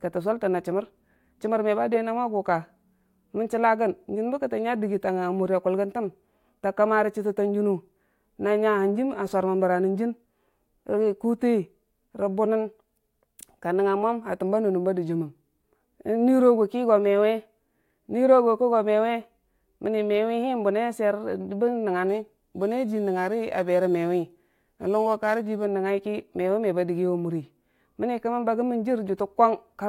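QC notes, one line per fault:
22.09–25.65 s, crude rate conversion: samples just dropped, fitting a 48 kHz to 44.1 kHz change, leaving a gritty inharmonic fizz about 35 dB under the speech.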